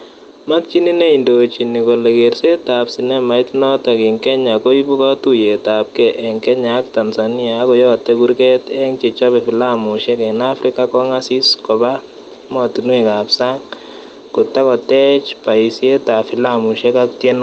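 Throughout this speech clip there is a gain swing of around 5 dB that leaves loud and quiet passages squashed toward the same level. This is gain pumping, and the likely cause is microphone gain set far too high, with a fast compressor or limiter clamping down on each loud sound and releasing in the gaps. The call path itself can be heard as a band limit near 8 kHz, which fits an Opus stream at roughly 24 kbps.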